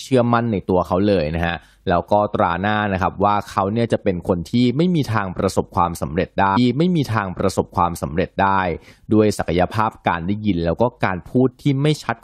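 At 6.56 s the speech jumps back and a stretch of about 2.0 s plays a second time, running to 8.56 s before the clip continues. This is a stream segment repeated: the player queued or fetched the same chunk twice, so the programme loops once with a small blip at the join. Unlike a buffer stutter, which loops a tiny fragment rapidly, this replays a whole segment of coherent speech once.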